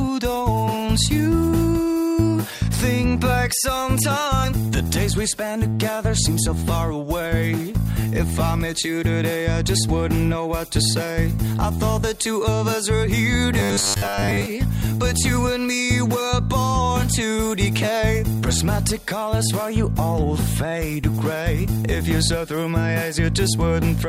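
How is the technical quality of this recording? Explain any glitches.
One glitch stands out. From 13.59 to 14.46 s there is robotic sound from repeated short buffers: a rigid, metallic 100 Hz buzz. Audio likely arrived too late, so a 10 ms slice was looped for most of that stretch. A spectrogram shows evenly spaced harmonics every 100 Hz, and the waveform shows identical 10 ms cycles repeating.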